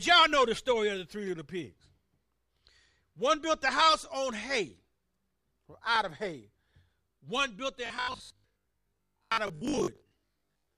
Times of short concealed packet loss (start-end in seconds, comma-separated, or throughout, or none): none